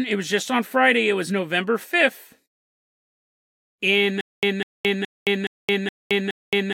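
The playback or stream likely stalled from 4.21 s to the end of this speech clip, producing a stutter with silent gaps: a 200 ms fragment replays six times, each followed by about 220 ms of digital silence, repeating every 420 ms while the intended audio is lost.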